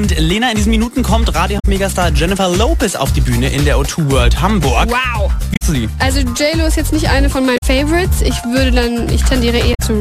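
Damaged data in a compressed stream corrupts four stretches, at 1.56 to 1.65 s, 5.53 to 5.62 s, 7.54 to 7.63 s and 9.71 to 9.80 s. The decoder misreads the spoiled frames and hunts for the next valid header, so each roughly 0.1 s gap breaks the sound as a chirp, squawk, click or brief hole.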